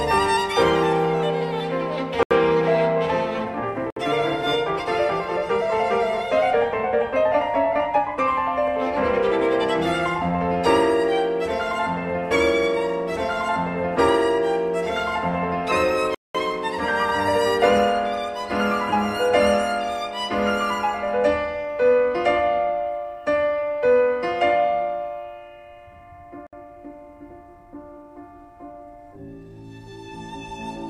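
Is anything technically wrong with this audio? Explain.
Yes. The sound drops to silence four times: at 2.23–2.31 s (78 ms), 3.90–3.96 s (60 ms), 16.15–16.35 s (200 ms) and 26.47–26.53 s (61 ms). These are Bluetooth stalls, most likely caused by radio interference delaying packets until the receiver's buffer emptied and playback halted. Each gap appears as a flat, dead line in the waveform and a clean vertical blank band across all frequencies on a spectrogram before the audio resumes.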